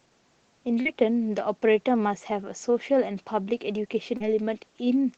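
Around 0.81 to 0.87 s and again at 4.17 to 4.22 s there's short concealed packet loss: roughly 40 ms of the call didn't reach the decoder in time, and the receiver papered over each gap by stretching the preceding sound forward before fading back into the real signal. You hear it as a quick smear or wobble, and a brief consonant-like sound can get swallowed. All of this sits inside a call-codec sound that tops out around 8 kHz.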